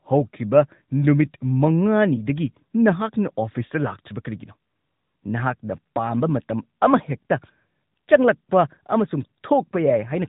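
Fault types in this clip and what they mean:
AMR narrowband mobile codec: This is the old 2G/3G phone-call codec, and you hear it right away. The speech runs at telephone sampling and nothing gets through above about 3.8 kHz, so the top is just gone. The voice is rebuilt from a vocal-tract model driven by sparse pulses, which gives it that plainly audible buzzy, synthetic edge. The amount of damage fits one of the mid-rate modes, around 10 kbps.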